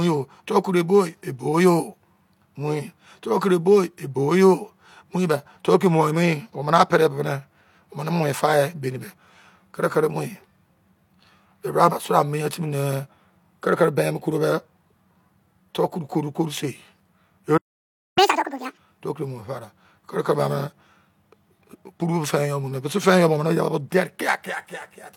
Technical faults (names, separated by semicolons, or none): playback stall; catch-up at higher speed